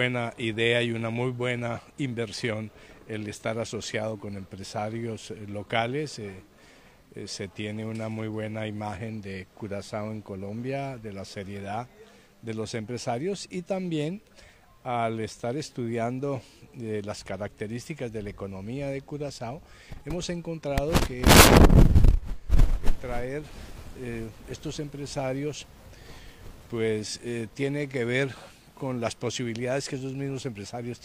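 No technical faults can be heard anywhere in the audio.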